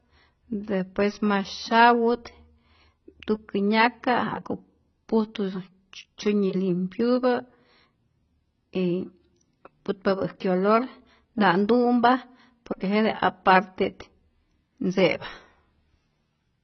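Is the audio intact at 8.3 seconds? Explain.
No. At 8.3 seconds the speech carries AAC compression damage, which runs through the whole clip rather than appearing at that moment alone. The likely cause is AAC-LC coding at a very low rate, which fits roughly 16 kbps. The coder has too few bits for the spectrum, so it removes everything above 6 kHz and thins out what remains. The speech sounds dull and muffled, with smeared, warbling sustained sounds and fizzy sibilants.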